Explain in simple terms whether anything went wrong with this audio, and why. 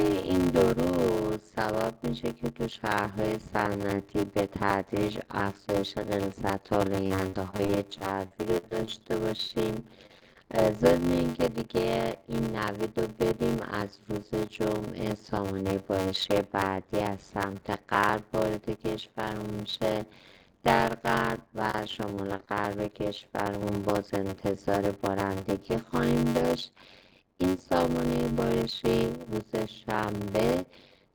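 Yes, a few things went wrong. The steady one is a block size mismatch (padded). One stage hands over blocks that are too short for the next, which fits a 512-sample read, and the leftover gets filled with silence. That adds a buzz at about 94 Hz throughout, and everything plays at roughly 0.625 speed while the timbre stays about the same.

Then there's repeated packet loss, which gives that robotic, choppy sound. From 7.07 to 10.37 s, chunks keep going missing, and each hole is patched by dragging out the last bit of sound, with the longest gap about 52 ms. It happens again, more briefly, from 21.71 to 22.49 s.

Last, at 23.19 to 23.23 s there's a short stall from a late packet. One piece of audio showed up late, so the last sound gets held for about 19 ms until it arrives, and then playback picks up where it left off with nothing lost.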